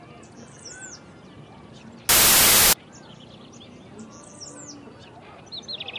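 A recording of everyday sounds, interrupted from 2.09 to 2.73 s by file tags played as audio. An embedded cover picture's compressed bytes were decoded as samples, producing very loud white noise. On the waveform it appears as a solid dense block, and on the spectrogram as a uniform broadband slab with sharp vertical edges.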